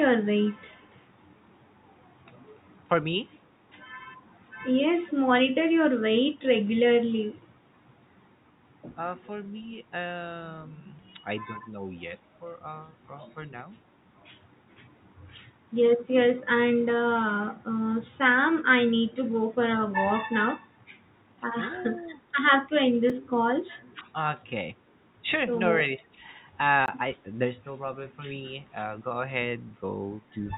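From 0.55 to 1.02 s a very faint delayed copy of the speech trails the talker, sitting roughly 284 ms behind and far below the direct sound. This is an echo leak. The far side was likely playing the call over a loudspeaker, and its echo canceller let a small residue of what the microphone picked up pass back down the line.

At 4.21 to 4.33 s the room background sinks by about 14 dB for around a tenth of a second, then recovers. This is background gated by the echo canceller. While its loudspeaker was active, the canceller clamped the microphone hard, taking the ambient sound down with it until it released.

From 19 s onward the speech itself dips in short patches: 19.22 to 19.28 s (a deep drop), 20.85 to 20.91 s (milder), and across 22.41 to 23.38 s, where the speech is pulled down deeply in pieces. This is speech suppressed in double talk. With both sides likely talking at once, the canceller could not tell its own talker from the loudspeaker echo and attenuated everything.

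Inside that stretch, at 23.10 s, there is a single sharp tick. This is a block of digital silence only about 4 ms long. The sound cuts out and back with no fade, so the tick comes from the hard edges.

The double-talk ducking returns at 23.93 to 24.09 s and at 25.98 to 26.19 s, with moderate to mild dips each time.

From 26.86 to 26.88 s a longer 20 ms block of digital silence is heard as a brief hole.

Throughout, the call path runs through G.711 A-law, which is why nothing is heard above 4 kHz.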